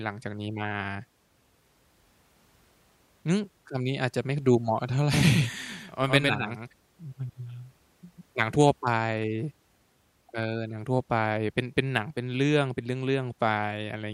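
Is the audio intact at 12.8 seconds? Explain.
Yes, at 12.8 s the speech plays through intact, with no audible fault.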